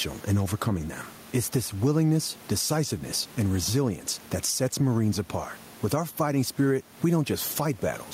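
It's a speech recording with gain pumping running the whole way through. The room noise sits about 33 dB under the voice, and the gain swings by something like 10 dB. Loud and quiet passages end up squashed close together. The likely cause is the input gain being set far too high for the mic, with a fast limiter or compressor clamping down on each loud sound.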